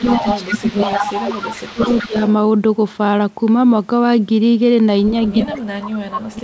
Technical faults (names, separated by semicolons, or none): speech suppressed in double talk; echo leak